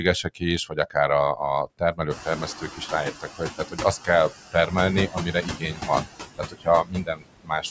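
Speech, with noise suppressor artifacts throughout: the suppressor pulls the background down by about 15 dB frame by frame, so the noise sinks between the words and rises under them. Speech cut by the noise suppressor occurs at 0.23 to 0.96 s, 1.36 to 4.73 s, 5.08 to 6.06 s and 6.38 to 7.64 s. Quiet consonants and word endings are taken for noise and drop by up to about 22 dB, so they sound swallowed. The noise suppressor catching up is heard from 2.1 to 2.49 s, after the room noise jumps by about 23 dB near 2 s. The louder noise first passes with only about 8 dB of reduction, then sinks as the estimate adapts over 390 ms.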